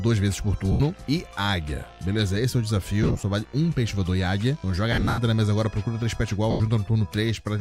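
Lost LE Audio frames occur at 0.72 s, 3.03 s, 4.92 s and 6.51 s. At each gap the LC3 decoder had nothing to play, so it repeated the last spectrum with random signs and faded it as the gap went on, turning the sound into a brief noisy smear. The first and last are single dropouts of 80 and 90 ms. The second scatters 120 ms of loss across 200 ms. The third is the longest, with 190 ms lost over 260 ms and one run of about a tenth of a second.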